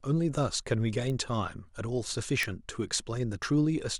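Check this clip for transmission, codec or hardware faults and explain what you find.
The clip has one hardware fault, word clock ticks. From 0.43 s to 3.77 s, about seven sharp ticks of uneven strength recur roughly every 0.7 s. A receiver running on its own unlocked clock keeps drifting past the sender's. At each slip it drops or repeats one sample, which fits clocks roughly 30 ppm apart. The steady spacing sets these ticks apart from random dropout clicks.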